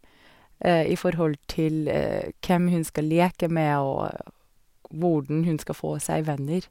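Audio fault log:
No faults heard in this speech recording.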